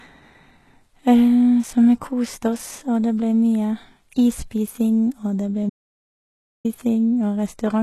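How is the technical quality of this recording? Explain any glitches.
The technical quality is poor, with audible codec damage throughout and one clear break in the speech.

HE-AAC compression runs through the whole clip and is likely the cause of its coarse top end. The treble is rebuilt from copied lower bands at what sounds like a very low bitrate, around 16 kbps. Sibilants turn gritty and metallic, and nothing reaches above 12.3 kHz.

An audio dropout to silence runs from 5.70 to 6.65 s, right after "det ble". The input was likely lost for about 0.95 s while recording carried on writing silence. The speech cuts out abruptly into total silence, with no room tone, then resumes mid-flow.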